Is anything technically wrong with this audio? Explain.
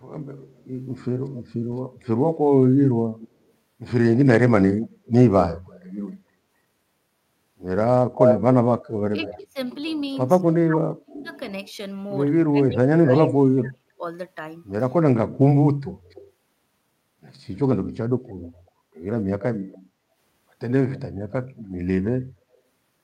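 Yes, there are three kinds of fault in this speech clip.

Echo leak appears at 0.01–3.28 s, 4.82–5.83 s, 8.17–11.71 s, 16.05–16.31 s and 18.28–22.57 s. A delayed copy of the speech follows the original by about 255 ms at first, creeping to about 283 ms by the end. It is faint in most passages, moderately audible at 4.82 s, and roughly as loud as the original at 8.17–11.71 s. The likely cause is a loudspeaker on the far end whose echo canceller let part of the returned audio through. A room reflection would arrive within a few tens of milliseconds, while this discrete copy comes back at over a quarter second.

Background gated by the echo canceller occurs at 8.7–8.83 s, a dip of about 10 dB lasting roughly 150 ms. The canceller clamped the microphone while its loudspeaker played, so the room sound briefly sinks and then recovers. Unlike a network dropout, the signal never vanishes completely, and the level comes back once the canceller lets go.

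Speech suppressed in double talk spans 9.11–14.03 s, overlapping the loudest echo passage. Both sides were talking, and the canceller, likely unable to tell the local talker from echo, attenuated the speech by as much as around 35 dB, about two seconds in total. What separates this from ordinary packet loss is that the drops track the overlapping talk rather than falling at random.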